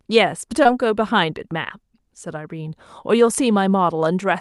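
A short concealed packet loss interrupts this speech clip at about 0.63 to 0.67 s. Roughly 20 ms of audio failed to arrive in time for the decoder, and the receiver filled about 14 ms of that by extending the sound just before it, then blended back into the real signal. The result is a brief smear or wobble rather than silence, which distinguishes it from a plain dropout, where the sound would cut out entirely. The call path's high-frequency limit near 12 kHz fits an Opus link at a moderate bitrate.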